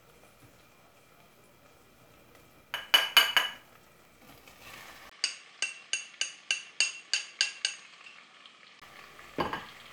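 A recording of sounds. At 5.10 s a 20 ms gap occurs, then the sound turns duller, with nothing above 9.6 kHz, drops a few decibels and carries a new noise floor, until 8.82 s, likely an input switched to a poorer device.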